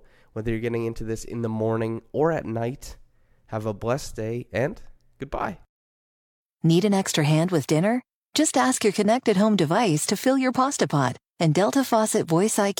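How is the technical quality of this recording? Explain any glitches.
Quality drops partway through the speech. Adaptive stream at a lower bitrate, from 5.74 s to the end: the player abruptly switched down without a gap, probably from AAC-LC 96 kbit/s to HE-AAC 48 kbit/s, so the treble turns synthetic and codec artefacts rise.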